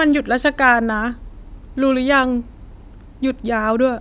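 A short speech recording with no audible technical fault anywhere in its signal.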